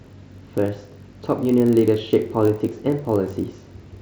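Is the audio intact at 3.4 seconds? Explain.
No. The block size mismatch (padded) fault runs through the whole clip, so it is present at 3.4 s too. One stage writes blocks slightly shorter than the next stage reads, which fits a 1024-sample read, and the leftover space in each block is filled with silence. Those tiny repeated gaps produce a buzz at about 46.9 Hz. The speech plays at 0.999 times normal speed, so the slowdown is negligible and the pitch stays essentially normal.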